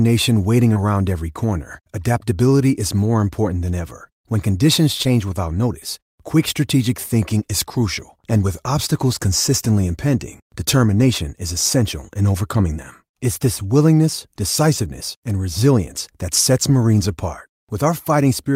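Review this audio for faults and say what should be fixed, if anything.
Short concealed packet loss occurs twice in this speech, at 0.73 to 0.77 s just before "every corner adaptability is" and at 5.03 to 5.07 s just before "without notice quick strategic". Each time about 20 ms of audio arrived too late, and the decoder extended the preceding sound to bridge the gap, leaving a brief smear. To prevent it, give the receiver a larger jitter buffer or add forward error correction.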